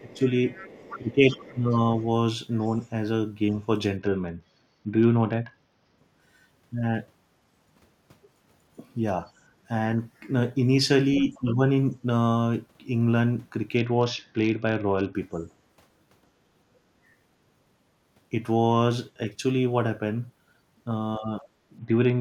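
From 0.0 to 1.76 s, speech suppressed in double talk, likely from the echo canceller turning both sides down together, dips the talker by about 15 dB for roughly a second in pieces. Overlapping it, from 0.11 to 2.86 s, the other side's voice leaking through, likely residual loudspeaker echo the canceller missed, sits faintly underneath at about 20 dB below the speech.

From 3.97 to 5.98 s, a Bluetooth SBC bit pool drop starves the upper sub-bands and coarsens quantisation, which fits a fall to around 66 kbps. The treble dulls and gritty noise rises.

At 9.40 to 9.45 s, background gated by the echo canceller pulls the microphone down during loudspeaker playback, so the room sound briefly dips by about 6 dB.

From 11.19 to 11.93 s, the other side's voice leaks through again, likely from uncancelled echo, at about 15 dB below the speech. Within that span, from 11.2 to 11.6 s, speech suppressed in double talk, likely from the canceller clamping during the overlap, drops the talker by about 10 dB.

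From 13.77 to 15.15 s, the same SBC bit pool drop returns, with dull treble and grit.

From 21.18 to 21.43 s, speech is again suppressed in double talk, likely by the echo canceller, dipping about 10 dB. From 21.78 s to the end, a final SBC bit pool drop brings the dulling and grit back.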